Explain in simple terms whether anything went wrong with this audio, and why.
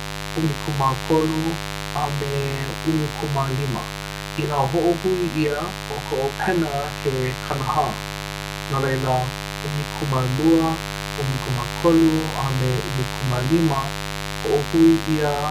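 Mains buzz runs from start to finish under the speech, fairly loud. A dimmer, rectifier or poorly shielded cable let sharp electrical spikes from the 50 Hz power supply into the recording, twice per cycle, creating a steady, raspy buzz reaching well above the hum itself.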